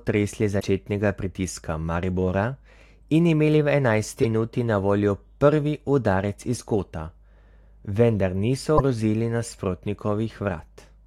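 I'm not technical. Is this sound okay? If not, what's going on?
No. There are two short glitches caused by damaged data in a compressed stream. The first is at 0.56 to 0.63 seconds. The second is at 8.74 to 8.81 seconds. Each lasts well under a tenth of a second and sounds like a quick chirp or blip cutting into the speech. The audio was stored in a compressed format, and a small part of it got corrupted. The player couldn't read that part, so it stumbled until it found clean data again.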